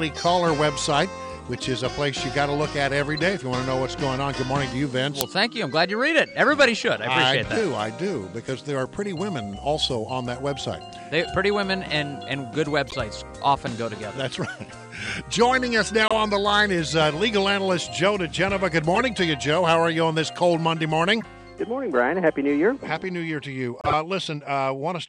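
A corrupt frame decoded at 3.15 to 3.19 s gives a brief chirp, peaking around -25 dBFS. Damaged bits in a compressed frame were played anyway. Misread gains and codes put energy at the wrong frequencies.

At 5.21 s, an uninitialised buffer plays as a short, harsh digital click. Stale memory was read out as samples before real audio arrived. It lasts under a millisecond, which fits a 32-sample block.

The corrupt frames return at 12.88 to 12.94 s, 16.08 to 16.12 s, 18.95 to 19.02 s, 21.21 to 21.23 s and 23.81 to 23.93 s. Each is a squeak or noise burst spanning roughly one to a few frames. Their levels vary, from about -20 dBFS up to nearly -5 dBFS by the last one.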